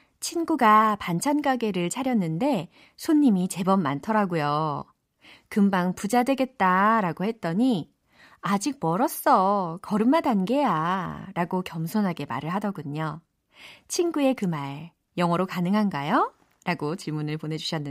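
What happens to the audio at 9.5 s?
Nothing goes wrong at 9.5 s; the speech carries on without any dropout, glitch or other fault at that moment.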